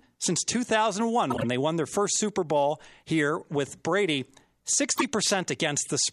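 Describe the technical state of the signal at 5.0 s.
A short burst of chirpy, squeaky noise cuts across the speech from 4.91 to 5.04 s, peaking near -10 dBFS. It's a corrupt frame decoded: bit errors in roughly seven consecutive compressed frames were played anyway, so misread gains and codes put energy at the wrong frequencies.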